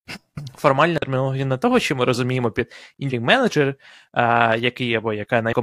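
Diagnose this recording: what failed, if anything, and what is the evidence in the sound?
The failure is at the codec stage: damaged data in a compressed stream. Three short glitches cut across the speech, at 0.98–1.03 s (just before "на того що ми"), 3.07–3.12 s and 5.48–5.54 s, each about 50 ms long. Corrupted bytes make the decoder misread those frames and lose sync until it finds a valid header. Unlike a network dropout, which leaves silence or a smeared fill, these corrupted frames come out as brief glitches.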